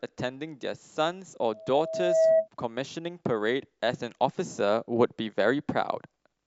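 From 1.53 s to 2.48 s a loudspeaker feedback squeal rises out of the speech. The microphone is hearing its own loudspeaker, and at 644 Hz the loop gain passes one, so that tone feeds on itself. It swells over roughly three quarters of a second into a piercing whistle about 10 dB above the speech. A spectrogram shows a bright horizontal line at 644 Hz, and the waveform's envelope visibly balloons.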